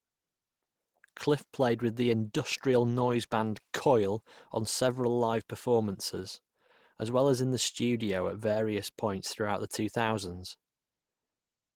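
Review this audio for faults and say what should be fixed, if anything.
Nothing here needs fixing, as no faults turn up anywhere in this speech recording.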